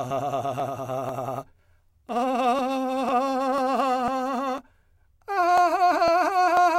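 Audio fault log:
0.10–6.57 s, periodic USB or driver dropouts: through the music there's a steady tick roughly every 0.5 s (0.498 s spacing), about fifteen in all. Something keeps stalling the USB link or the audio driver on a fixed schedule, and each stall throws away a couple of milliseconds of audio outright rather than filling it with silence. The waveform jumps across the gap, and that discontinuity is the click, evenly spaced because the interruption is.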